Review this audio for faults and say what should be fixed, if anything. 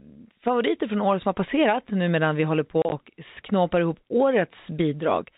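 Packet loss filled with silence occurs between 2.82 and 2.92 s: about 50 ms of the speech drops out in gaps spread across 100 ms, the longest 30 ms, which points to short 10 ms packets. The receiver inserts digital silence, so each hole starts and stops abruptly. Enabling packet loss concealment and a larger jitter buffer at the receiver would replace these silent gaps with smoothly extrapolated audio.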